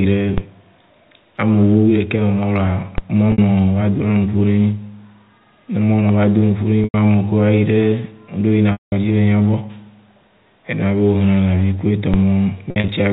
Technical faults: DC step; packet loss with pitch repetition

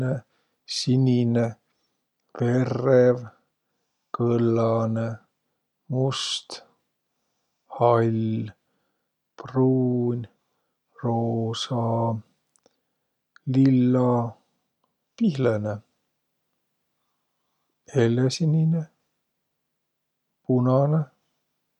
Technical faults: none

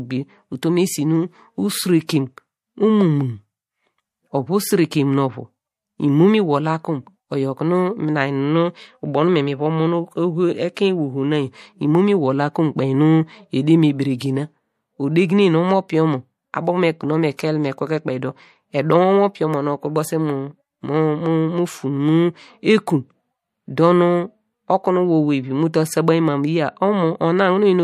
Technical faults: pre-echo

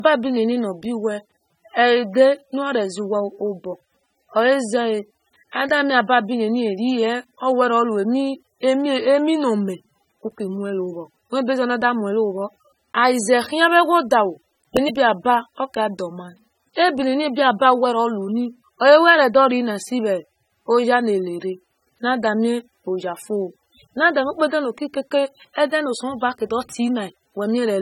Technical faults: low-bitrate audio saved at a high bitrate

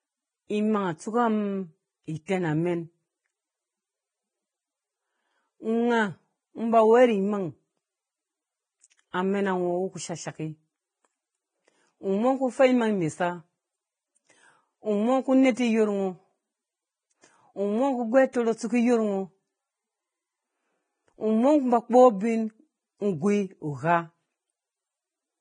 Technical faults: Vorbis compression; pre-echo

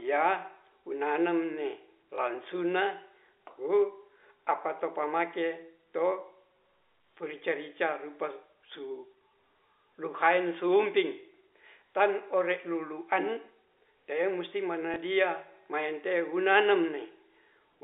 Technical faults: packet loss with last packet repeated

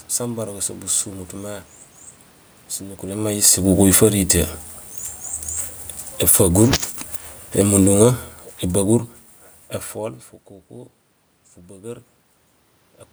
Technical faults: automatic gain falling; automatic gain rising

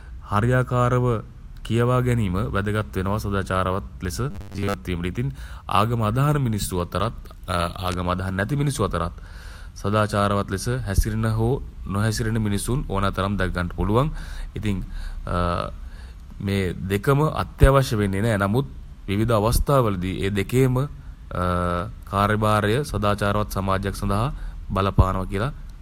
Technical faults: robotic sound from repeated short buffers

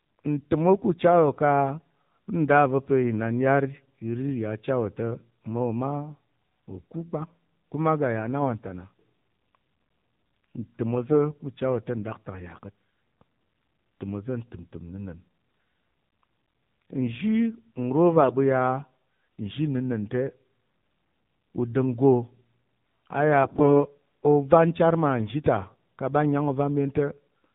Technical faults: AMR narrowband mobile codec; AMR bit errors

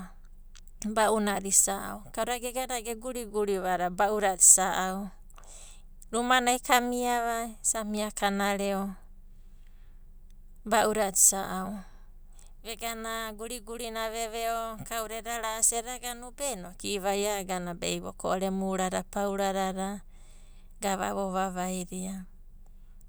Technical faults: none

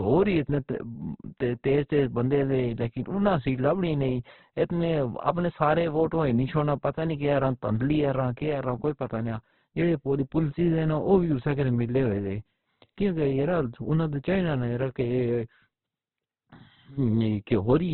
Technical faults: Opus compression

